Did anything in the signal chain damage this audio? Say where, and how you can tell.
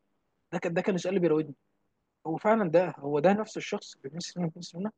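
No, nothing in the chain audibly damaged this speech recording: the signal holds steady level and continuity with no dropouts, gaps, distortion or spectral loss that would point to a problem at any stage.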